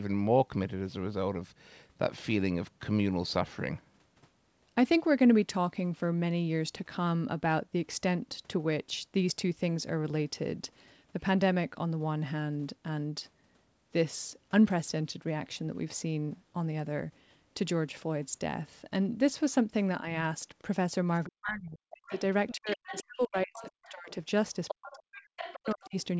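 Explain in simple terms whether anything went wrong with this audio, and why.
Toward the end, from about 21.3 s, the talker's voice keeps sinking or cutting out in pieces. This is speech suppressed in double talk. It happens at 21.26 to 22.13 s, 22.55 to 24.11 s and 24.72 to 25.95 s, each time nearly to silence. The likely cause is an echo canceller that heard both people speaking at once and turned everything down. Unlike a network dropout, these gaps come while the other side is playing on the talker's loudspeaker.

That other voice is the other side's voice leaking through. From 22.07 to 24.11 s and again from 24.68 to 25.9 s, a second, quieter speaker can be heard behind the talker, a little louder in the later stretch. It is likely the far end's speech, played on the talker's loudspeaker and picked up again by the microphone because the echo canceller didn't remove all of it. What sets it apart from plain background chatter is that it arrives together with the dips in the main voice.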